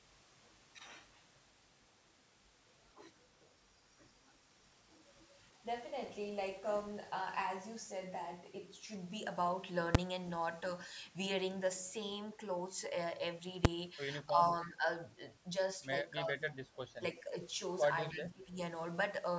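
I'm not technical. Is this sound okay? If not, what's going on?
No, there are three kinds of problem in this speech.

The first is invalid numbers at full scale. At 9.95 seconds and again at 13.65 seconds you hear a single sharp bang. Each lasts only a few thousandths of a second. A calculation inside the software went wrong and produced nonsense values. Those were pushed to the most extreme value possible. So a tiny slice of sound becomes one hard, loud pop.

The second is speech suppressed in double talk. The voice dips, thins or drops out in short pieces. This happens from 14.33 to 14.40, 14.66 to 14.87, 16.24 to 16.42, 17.00 to 17.35 and 18.12 to 18.59 seconds. Some dips are slight and some are deep. The likely cause is both people talking at once. The echo canceller could not tell the talker from the other side's sound, so it turned everything down.

The third is echo leak. Around 14.62 to 14.67 and 16.50 to 16.54 seconds there is a faint, brief repeat of the voice. 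It comes about a third of a second late. The likely cause is a loudspeaker on the far side. Its echo canceller missed part of what its microphone picked up, and that leftover was sent back.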